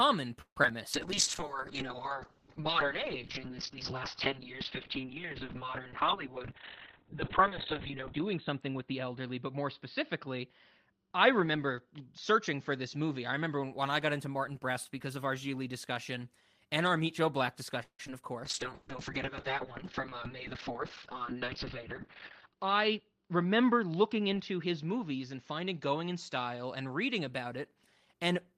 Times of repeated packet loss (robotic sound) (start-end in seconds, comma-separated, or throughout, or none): 0.41-0.72